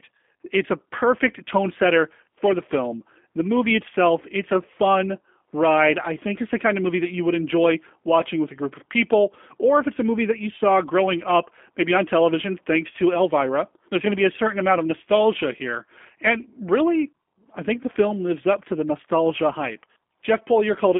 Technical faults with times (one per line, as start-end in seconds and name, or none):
0.00-20.99 G.729 codec